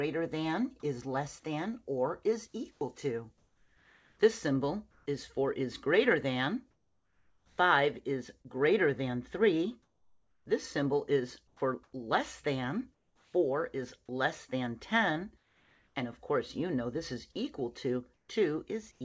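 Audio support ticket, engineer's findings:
Sound dropped by the voice detector, 2.72–2.81 s: sound cuts out and gives way to a flat hiss for 90 ms, with about 40 ms of real sound gone. Likely sender VAD misreading the sound as background and halting transmission; receiver filled the gap with comfort noise. Band-limited above 8 kHz throughout, which fits a G.722 call path.

Comfort noise in place of the background, 2.72–5.06 s, 9.83–13.34 s, 15.38–15.95 s, 18.14–19.01 s: background loses texture and turns to steady, featureless hiss in pauses. About 1.05 s, 1.23 s, 0.57 s and 0.24 s swapped respectively. Third stretch about 3 dB quieter than the real background, which sits about 39 dB below the loud parts. Likely DTX during silence, receiver synthesising noise from sparse spectral updates.

Sound chopped by the voice detector, 6.71–8.48 s: choppy, gappy sound; roughly 0.9 s replaced in total. 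Likely VAD toggling send/stop repeatedly across quiet passages, each gap patched with comfort noise.

Onset clipped by the voice detector, 11.57 s: sound starts abruptly out of hiss, soft beginning missing, about 30 ms cut. Likely VAD slow to detect restart, so the first frames were never sent and comfort noise covered them.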